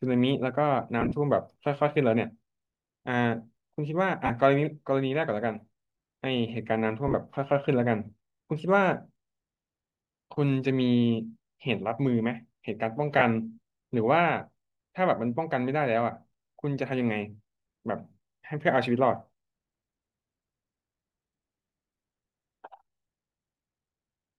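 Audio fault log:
1.01–1.12 s, 4.26–4.30 s, 7.08–7.14 s and 13.19–13.22 s: lost LE Audio frames. Dropouts total 22.5 to 60 ms, some scattered, which fits 7.5 ms frames. The decoder refills each gap from the last spectrum with random signs. Speech briefly becomes a noisy smear.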